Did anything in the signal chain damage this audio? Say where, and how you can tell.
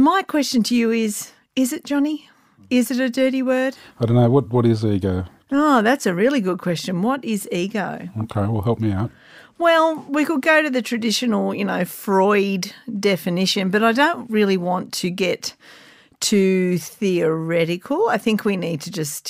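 No, nothing in this speech recording points to damage at any stage of the signal chain.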